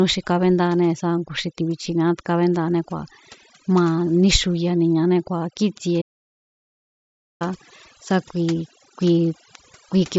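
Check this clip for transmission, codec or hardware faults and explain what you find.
Two faults stand out in this speech clip, carried over what sounds like a Bluetooth mSBC headset link whose band ends near 8 kHz with only light graininess.

Overdone noise removal runs through the whole clip. A noise suppressor set far too aggressively cuts any frequency band that sits close to its noise estimate, taking quiet parts of the voice along with the noise. The background sinks to near silence sprinkled with twinkling specks.

A playback stall runs from 6.01 s to 7.42 s, right after "ma níxuyaniñané kíi̱tsie". The output goes silent for about 1.4 s mid-flow and then resumes. The likely cause is the player running out of buffered data, or its audio thread being blocked, until it could recover.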